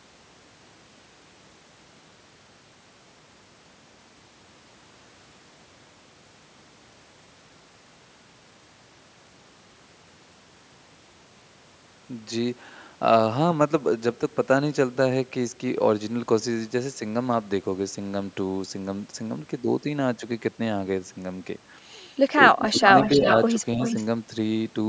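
From 22.53 to 22.79 s the speech dips by around 10 dB in short patches, and again more mildly, by about 5 dB, from 23.15 to 23.24 s. This is likely speech suppressed in double talk: with both sides talking, the echo canceller turned the talker down along with the echo.

From 22.81 to 23.36 s, and again from 23.83 to 24.04 s, a copy of the voice trails by about 362 to 365 ms, roughly 10 and then 15 dB below the speech. This is likely an echo leak, where loudspeaker sound slipped past the loudspeaker side's canceller and came back.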